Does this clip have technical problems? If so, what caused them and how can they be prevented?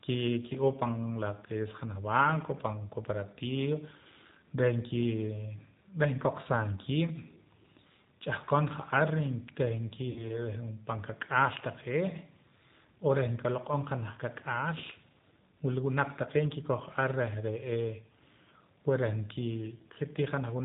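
Yes. The whole recording carries plainly audible G.729 codec damage: this 8 kbit/s codec rebuilds speech from a vocal tract model and a few pulses per frame, so nothing above 4 kHz survives and the voice sounds rough and synthetic. That synthetic texture, not just muffling, distinguishes it from simple low-pass filtering. Using a wideband codec such as G.722 or Opus would prevent it.

From 10.10 to 10.39 s there is VoIP packet loss concealed by the speech codec. About 60 ms of audio went missing, which fits three lost packets, and the decoder stretched its last pitch and filter into a fading buzzy tone or coloured noise. The voice then stays weak as frames rebuild. A plain dropout would fall silent instead. Forward error correction, a better jitter buffer or network QoS would reduce such losses.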